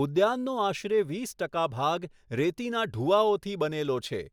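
No technical faults occur in the audio at any point, so there is nothing to describe in time order.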